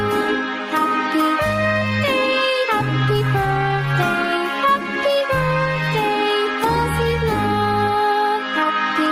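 Gain pumping runs right through the clip, with the level swinging by roughly ten decibels. Likely the input gain was set far too hot, with a fast limiter clamping down, so everything sounds squashed.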